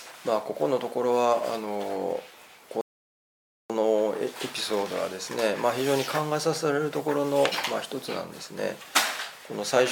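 At 2.81 s the audio stops dead and stays silent until 3.70 s, then picks up exactly where it left off. This is a rebuffering stall: playback used up its downloaded audio and paused to wait for more, adding about 0.89 s without losing any content. On a waveform it shows as a flat gap cut cleanly into the signal. On a spectrogram it's a blank vertical band with matching content on either side.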